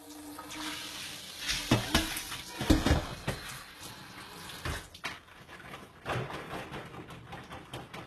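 Everyday sound, likely put through HE-AAC compression at a low rate, around 16 kbps, throughout: copied treble sounds gritty and metallic, with nothing above 12.3 kHz.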